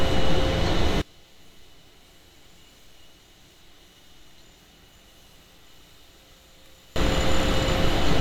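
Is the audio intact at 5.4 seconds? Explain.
No, one stereo channel is likely inverted from 1.02 to 6.96 s, so the shared content cancels in mono, dropping about 31 dB to a faint residue.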